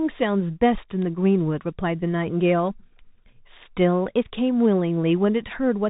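Speech passed through a Bluetooth CVSD headset codec, whose one-bit slope coding fits a 64 kbps link: nothing above 3.8 kHz survives, and audible granular hiss and scratchy s sounds result. At 1.02 s, an electrical switching spike, likely from a nearby switch or discharge coupling into the line, adds a sharp snap on top.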